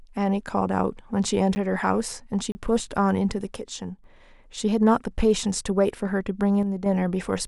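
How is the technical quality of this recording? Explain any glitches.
The recording has two kinds of glitch: two brief dropouts to digital silence and two stretches where the level sinks.

At 1.55 s and again from 2.52 to 2.55 s, there are blocks of digital silence. The playback or processing chain most likely failed to deliver samples in time, and zeros filled the gap. The speech stops dead and resumes with no fade. The 10 ms gap at 1.55 s comes across as a sharp tick, while the 30 ms gap at 2.52 s opens into a short, audible hole.

From 3.56 to 4.04 s and from 6.63 to 6.86 s, the speech abruptly drops by about 6 dB and then jumps back. The likely cause is one channel dropping out of a stereo feed that is then summed to mono. Losing half the shared signal produces exactly this halving of the level, so each stretch sounds like a sudden step down in loudness rather than a fade.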